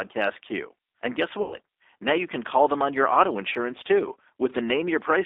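Speech carried over a G.729 codec at 8 kbit/s throughout, band-limited to roughly 300 Hz to 3.6 kHz, with plainly audible rough, synthetic coding texture from its pulse-based excitation model. VoIP packet loss concealed by the speech codec occurs from 1.42 to 1.56 s. About 100 ms of audio is lost, consistent with several consecutive packets, and the decoder stretches the last pitch into a fading buzzy tone or coloured noise before normal speech recovers.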